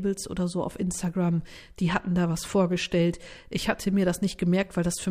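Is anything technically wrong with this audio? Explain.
No, nothing is technically wrong with this audio.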